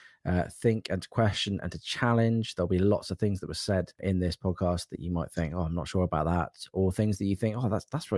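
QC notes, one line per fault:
No audible faults were found on this speech recording.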